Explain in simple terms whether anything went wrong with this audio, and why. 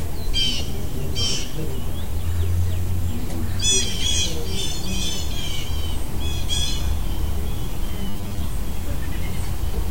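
Audio likely arrived too slowly, so 10 ms pieces were replayed, causing robotic sound from repeated short buffers: a metallic 100 Hz buzz from 8.10 to 8.43 s.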